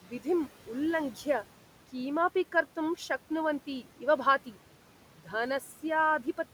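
Noise suppressor artifacts run through the whole speech recording. The suppressor pulls steady background noise down by about 12 dB frame by frame, and the room noise sits about 19 dB below the voice and dips between phrases. A spectrogram shows a mottled, flickering noise floor.

From 3.67 to 4.03 s, speech is cut by the noise suppressor, which mistakes soft parts of the voice for noise. Pieces adding up to about a tenth of a second drop by as much as about 11 dB and sound swallowed, showing as brief notches in the waveform envelope.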